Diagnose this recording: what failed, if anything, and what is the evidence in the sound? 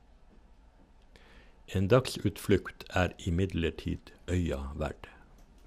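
DAB burbling at 4.65 s, a brief few watery blips on the speech. Weak reception let a small rate of bit errors slip past error correction into the MP2 data, so corrupted samples put short blips of noise in single sub-bands, consistent with about two corrupted frames.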